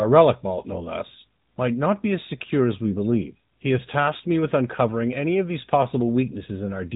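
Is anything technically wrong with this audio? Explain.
Yes. AMR narrowband mobile codec, throughout: the audio is squeezed through a vocal-tract model, leaving nothing above 3.8 kHz and a plainly audible buzzy, synthetic edge, consistent with a mid-rate mode near 10 kbps.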